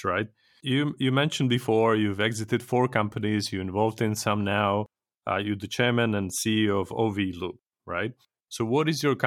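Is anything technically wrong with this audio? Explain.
No, nothing technically wrong can be heard here.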